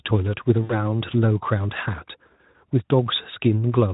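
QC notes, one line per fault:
0.64–0.89 s and 2.33–2.36 s: VoIP packet loss concealed by the speech codec. Gaps of about 60 ms and 20 ms are filled by a fading extrapolation, buzzy or noise-like, and the speech stays weak briefly after each gap.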